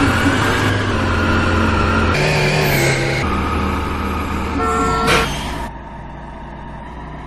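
Compressed frames skipped at 0.41 s and again at 5.67 s: whole blocks of the encoded stream never reached the output, either missing from the file or rejected by the decoder as damaged. The audio leaps forward by about 150 ms at the first point and about 200 ms at the second, which fits runs of roughly six or seven and roughly nine or ten frames of 23.2 ms. Between 2.14 s and 3.23 s, a section at the wrong speed plays back 1.74 times faster than it was captured, likely because that stretch was clocked at the wrong rate by the editor or player. Speed and pitch jump together at the boundaries, so the passage turns hurried and high, raised by roughly ten semitones, before snapping back to its proper rate.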